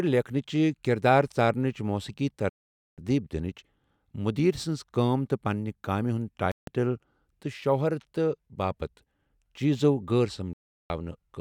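The speech cuts to silence three times and then resumes: at 2.49 s for about 0.48 s, at 6.52 s just after "تہٕ پننہِ كامہِ ہندِ" for about 0.16 s, and at 10.53 s for about 0.37 s. These are likely Bluetooth stalls, where interference delayed packets and the headphones' buffer emptied until the resent audio arrived.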